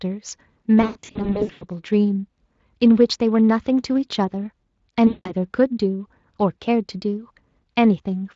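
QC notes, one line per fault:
0.81–1.65 s, VoIP packet loss concealed by the speech codec. About 520 ms of audio drops out in scattered gaps across 800 ms. The longest gap is 100 ms. The decoder fills each gap by repeating its last pitch and spectral shape at falling gain, so the sound turns buzzy and fades. Each frame builds on the previous one, so it stays weak briefly after packets return.
5.07–5.32 s, VoIP packet loss concealed by the speech codec. About 180 ms is lost here. The same extrapolation stretches the sound into a fading, coloured buzz before recovery. The underlying Speex coding adds only light, steady roughness.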